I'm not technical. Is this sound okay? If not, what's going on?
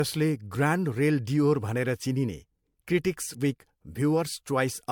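No. Generation loss runs through the whole clip. The speech sounds swirly, hollow and smeared, and the starts of sounds are blurred. This is likely from being saved as MP3 over and over, about four times in all, with each pass adding fresh damage.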